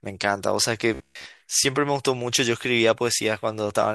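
From 0.94 to 1.26 s the speech turns into a rigid, metallic buzz with a fixed pitch of 66.8 Hz. This robotic sound from repeated short buffers is likely a buffer starved of new audio and filled by looping the last 15 ms or so, with most of that stretch repeated rather than real. A spectrogram shows flat harmonic lines every 67 Hz, and the waveform shows identical cycles recurring every 15 ms.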